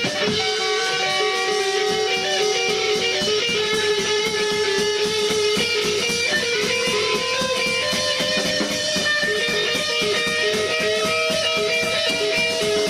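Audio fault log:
Nothing to log here; I listened all the way along and there's no fault to report anywhere in this audio.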